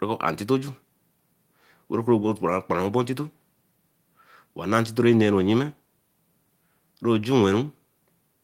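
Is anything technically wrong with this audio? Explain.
No, nothing technical stands out here, so this speech recording doesn't give me anything to flag.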